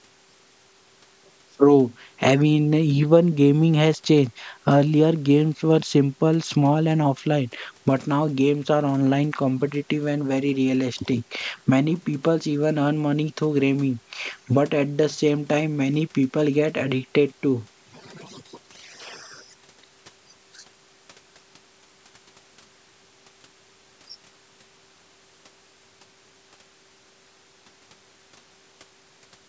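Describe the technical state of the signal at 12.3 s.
At 12.3 s the speech is intact, with no fault present, only the ordinary call microphone processing that trims the lowest bass and leaves nothing above 8 kHz.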